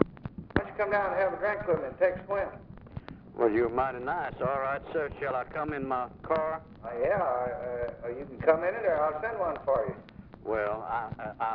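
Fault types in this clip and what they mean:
No faults can be heard.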